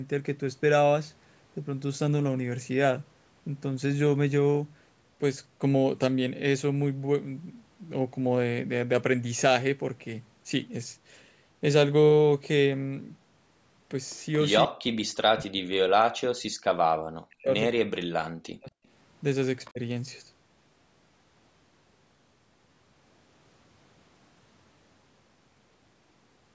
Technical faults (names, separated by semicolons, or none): speech suppressed in double talk; echo leak